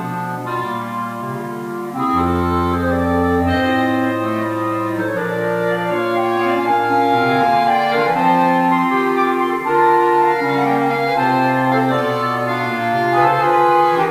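Low bit depth without dither runs through the whole clip, from start to finish. The audio was likely reduced to about 7 bits by plain rounding, with no dither added first, so the rounding error tracks the waveform instead of forming a steady hiss. The result is a grainy, rasping distortion sitting roughly 30 dB below the sound, which thickens and shifts as the sound changes and grows most gritty where the level falls low.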